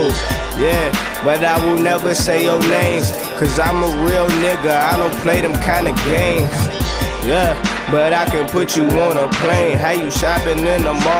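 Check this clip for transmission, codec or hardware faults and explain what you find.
Nothing in the transmission path, encoding or playback hardware produces any audible defect here, so there is nothing to report.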